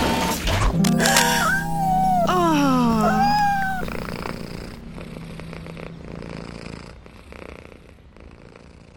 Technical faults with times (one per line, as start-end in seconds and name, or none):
0.84-1.26 cable scratch noise